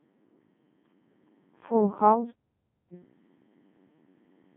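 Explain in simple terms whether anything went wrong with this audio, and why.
Two things went wrong. The whole clip passed through the Codec 2 vocoder, a radio voice codec. It does not keep the real sound wave. It sends only a rough outline of pitch and tone, then rebuilds the speech from simple tones. So the speech sounds robotic and buzzy. It also sounds thin, with nothing above about 3.8 kHz.

There is also a playback stall. From 2.31 to 2.93 s the sound stops dead for about 0.6 seconds, then carries on. The likely cause is that the player briefly ran out of data or was held up, so it went silent.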